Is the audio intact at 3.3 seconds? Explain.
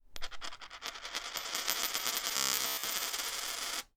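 No, not quite. Right around there, from 3.25 to 3.30 s, there's damaged data in the compressed stream. The decoder hits frames it can't read properly, loses sync and jumps to the next frame header, so you get a brief glitch, a chirp, squawk, click or short hole.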